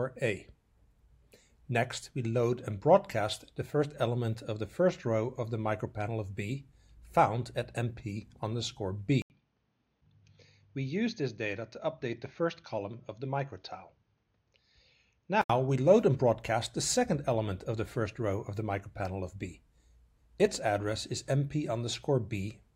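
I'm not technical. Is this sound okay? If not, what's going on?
No. From 9.22 to 15.50 s the recording likely came through an input switched to a poorer device, so the sound goes dull and a little quieter, with a brief gap at the switch.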